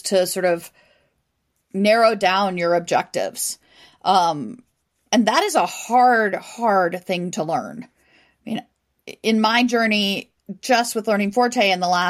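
No technical faults can be heard anywhere in the recording; the signal stays steady and intact throughout.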